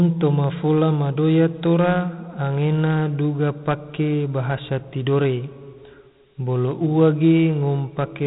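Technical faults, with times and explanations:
Throughout, Dialogic VOX ADPCM. Nothing is heard above 3.8 kHz, so the speech sounds narrow. Each sample is stored as a coarse 4-bit step from a prediction, which fits a 32 kbps coder. These rough steps leave a plainly audible gritty hiss trailing the speech.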